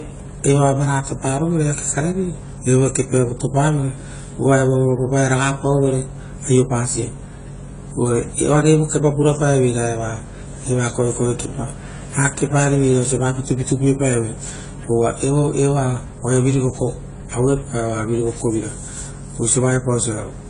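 From start to finish the speech is dull and smeared, with nothing above 10 kHz and a warbling, fizzy texture on sustained sounds and sibilants, likely AAC compression at a bitrate near 24 kbps. Unlike a plain low-pass filter, the quantiser's spectral holes produce this artefact.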